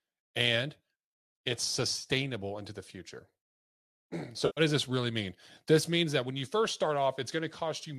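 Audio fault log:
1.94 to 2.07 s, AAC frame loss with concealment: about 70 ms of frames drop out in short runs scattered over roughly 100 ms, which fits seven 10 ms frames. The decoder patches each gap from the last good spectrum, so the sound turns briefly smeared and phasey. 4.46 to 4.61 s, AAC frame loss with concealment: 110 ms of frames lost within about 150 ms, heard as a longer noisy smear, likely on a low-delay AAC stream.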